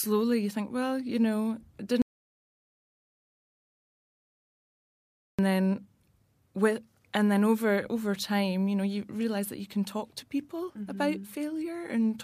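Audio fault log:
2.02 to 5.39 s, audio dropout to silence. The speech cuts off abruptly just after "well you know it" and returns mid-flow about 3.37 s later. The gap is silent, with no room tone or background hiss underneath. That points to the input itself vanishing, likely a dropped device connection, a broken link or an accidental mute, while recording carried on writing silence. Whatever was spoken during those seconds is lost.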